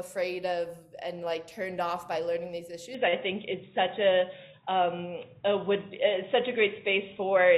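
At 2.95 s the sound abruptly turns dull and boxy and stays that way to the end of the clip. From that point nothing is present above 3.8 kHz, the level shifts by a few decibels, and a faint new background noise sits well beneath the signal. There is no gap at the transition. This points to an input switched to a poorer device, likely a change of microphone or a headset's narrowband call profile taking over mid-recording.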